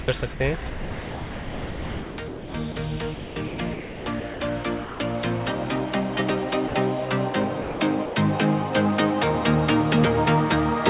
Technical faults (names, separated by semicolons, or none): sound dropped by the voice detector; sound chopped by the voice detector